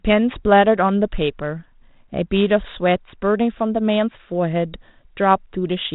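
A speech clip with nothing technically wrong with it, carried over G.726 telephone coding at 32 kbit/s that is working as it should.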